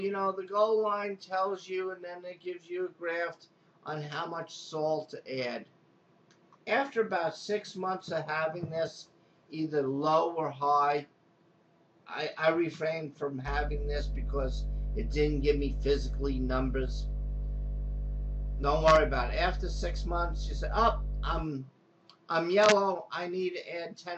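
A ground loop or nearby transformer couples 50 Hz mains hum into the audio from 13.45 to 21.45 s, a steady low tone roughly as loud as the wanted sound.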